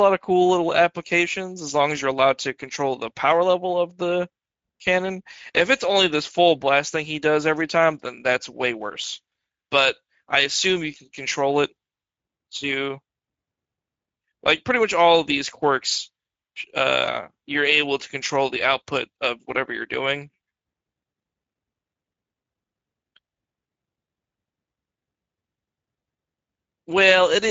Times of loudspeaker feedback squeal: none

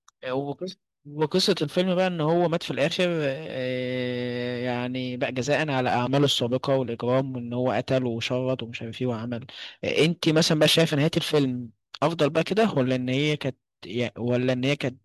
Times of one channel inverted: none

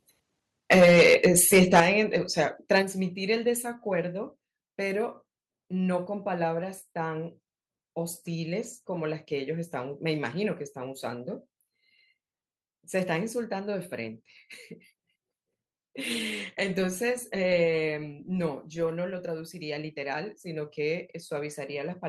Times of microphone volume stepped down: 0.79, 1.80, 2.82

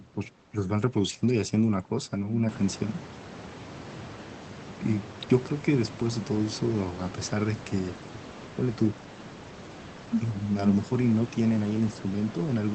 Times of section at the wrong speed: none

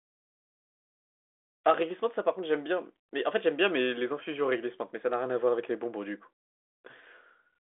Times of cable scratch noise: none

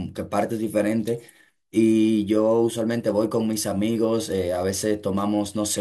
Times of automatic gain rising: none

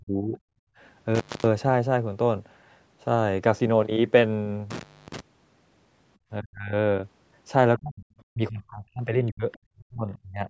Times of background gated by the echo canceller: 0.66-0.78

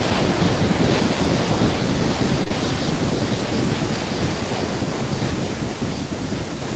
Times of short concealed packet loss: 2.43-2.52

